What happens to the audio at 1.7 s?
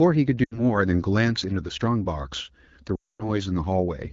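Nothing goes wrong at 1.7 s: the speech there is intact, carried by the AMR wideband (HD Voice) codec at 12.65 kbit/s, where the HD Voice coding keeps it clear.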